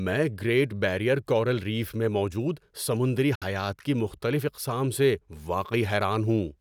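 A Bluetooth dropout cuts the speech from 3.35 s to 3.44 s, right after "ریف میں موجود سمندری" and before "حیات کی مختلف اقسام". The audio drops into silence, then resumes mid-flow as though it had kept playing underneath. This is likely caused by wireless packets failing to reach the headphones in time, so the receiver had nothing to play. About 61 ms of audio is lost, which fits roughly four dropped frames.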